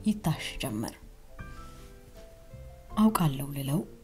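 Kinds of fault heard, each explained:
No audible faults.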